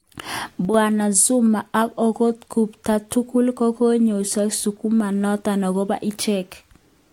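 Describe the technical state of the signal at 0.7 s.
At 0.7 s the signal sits inside a sudden gain jump from 0.65 to 0.74 s: the digital gain likely stepped down by about 6 dB between adjacent samples with no ramp, so the speech and its background noise drop together abruptly.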